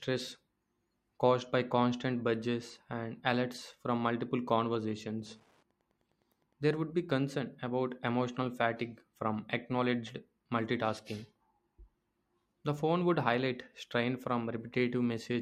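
From 4.36 to 6.92 s, after "budgets and alerts from", Wi-Fi interference: a nearby radio's 102.4 ms beacon, rectified by the circuit, ticks faintly about ten times a second.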